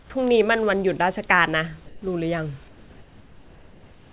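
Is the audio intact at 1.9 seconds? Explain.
No. From 1.86 to 2.02 s, about 160 ms, the pause shows comfort noise in place of the background. The likely cause is discontinuous transmission: the sender went quiet in a speech gap and the receiver filled it with synthetic noise. The background, about 27 dB below the loud parts, keeps its level but turns steady and featureless. Unlike a dropout, there is no silence or click, only the real room detail replaced by smooth hiss.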